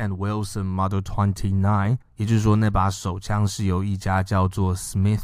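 Nothing here trips the ear: no technical faults turn up anywhere in the recording.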